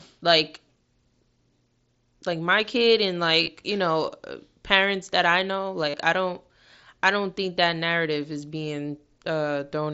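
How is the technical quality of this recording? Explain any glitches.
Two brief glitches break the speech, both from the same fault.

Concealed Bluetooth headset packet loss occurs at 3.42 to 3.48 s, after "like my kid and", and at 5.89 to 5.94 s, after "parents that I know". When voice packets from the headset went missing, the phone filled each gap by repeating the best-matching recent stretch of waveform. Each event lost about 45 ms, which points to roughly six dropped frames. The first is scattered, its longest run 30 ms. Each sounds like a short buzzy hold with a slight warble as real audio resumes. The mSBC codec carries wideband speech up to 8 kHz with only light graininess.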